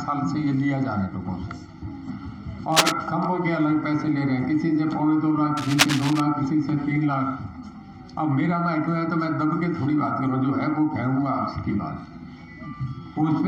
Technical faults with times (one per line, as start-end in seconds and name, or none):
2.72-2.92 cable scratch noise
5.57-6.20 cable scratch noise